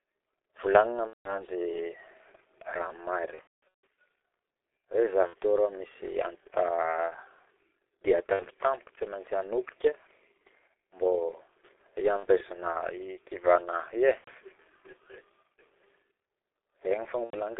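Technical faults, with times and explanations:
Throughout: G.723.1 codec. The speech is band-limited to roughly 250 Hz to 3.5 kHz and coded at 6.3 kbit/s in 30 ms frames, so it sounds muffled and hoarse, with consonants smeared because the slow-updating voice model cannot follow rapid changes. Codec damage is heavy.
1.07 to 1.44 s, 3.35 to 3.80 s, 5.27 to 5.34 s, 8.33 to 8.45 s, 12.17 to 12.28 s, 14.18 to 14.30 s, 17.24 to 17.36 s: VoIP packet loss concealed by the speech codec. Lost 30 ms frames were filled by extrapolating the last pitch and filter at falling gain, giving buzzy, fading stretches. The 3.35 s gap, about 390 ms of loss scattered across roughly half a second, is the most damaged.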